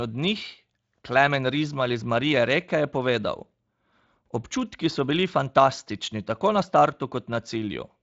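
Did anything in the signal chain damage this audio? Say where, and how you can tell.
No, nothing along the chain has hurt this speech; it reaches us through a Speex connection whose top end stops a little below 7.6 kHz, as that codec's wideband mode does, and nothing here points to a fault.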